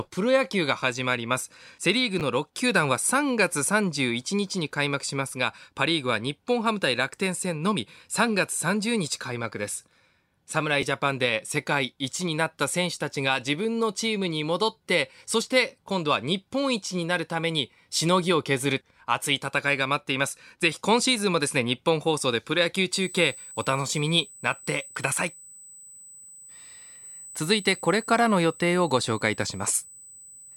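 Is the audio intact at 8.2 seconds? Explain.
Yes, the audio is intact at 8.20 seconds, with no fault audible at that moment.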